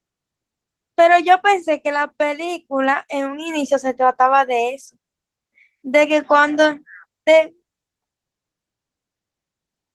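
Speech with Opus voice compression throughout, plainly audible as hoarse, slightly robotic voicing from coarsely coded excitation. The sound points to hybrid coding at a low bitrate near 16 kbps. A spectrogram shows smeared harmonics and a patchy, blocky band above 8 kHz, shifting every 20 ms.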